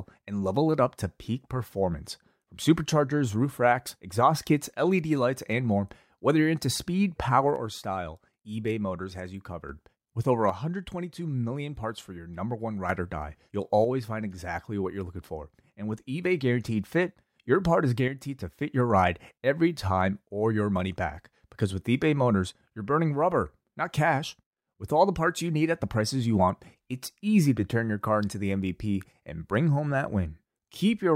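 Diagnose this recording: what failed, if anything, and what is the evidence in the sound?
The speech drops by about 6 dB at 7.56–9.69, 10.50–12.90, 13.85–16.25 and 18.08–18.61 s (after "your part is"), without muffling: one channel drops out, likely a loose analogue stereo connection.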